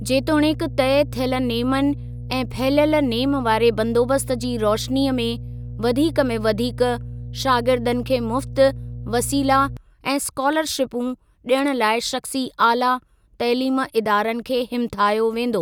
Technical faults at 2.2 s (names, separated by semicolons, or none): mains hum